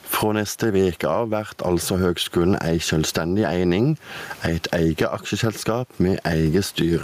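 A speech recording with gain pumping throughout. The level swing is around 20 dB. Loud and quiet passages sit close together, so the delivery sounds squashed. The likely cause is microphone gain set far too high, with a fast limiter or compressor clamping down on each loud syllable. The room noise sits about 40 dB below the speech.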